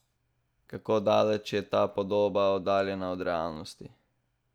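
No technical faults are audible.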